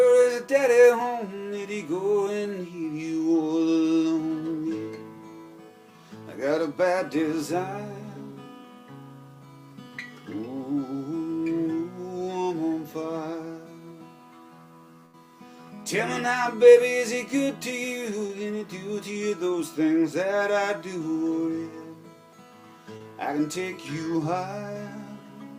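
At 15.05 s there's a burst of packet loss running to about 15.15 s. Roughly 80 ms of audio never arrived, and the receiver papered over the whole hole by carrying the last bit of sound forward and fading it down. So you hear a short held, dwindling stretch, and then the audio picks up again a little further along, with that 80 ms simply gone.

Later come two much smaller dropouts, both short concealed packet loss. The first is around 18.27 to 18.31 s, where about 20 ms went missing and roughly 15 ms was patched by extending the preceding sound before blending back in. The second is around 22.97 to 23.02 s, a bigger one at about 40 ms missing with some 31 ms filled. Each comes across as a quick smear or wobble rather than an obvious gap.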